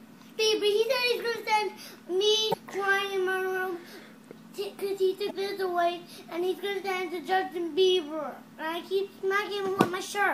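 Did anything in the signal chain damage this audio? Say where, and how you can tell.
Yes, at the codec: damaged data in a compressed stream gives brief glitches at 0.36, 2.50 and 5.27 s as frames misdecode.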